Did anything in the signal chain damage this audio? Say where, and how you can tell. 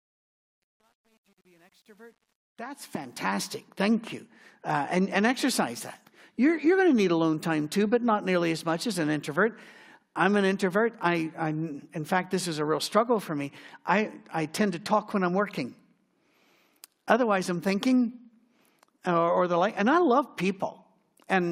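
Yes. The opening fade-in has truncation distortion on a fade, from 0 to 3.46 s. It's at its worst from the start to about 2.77 s, where the quiet speech sounds gritty instead of rising cleanly. That points to the gain or sample-format conversion stage. The fade was computed without dither and kept too few bits, which fits roughly a 10-bit word, so low levels collapse into coarse square steps until the distortion ends at 3.46 s.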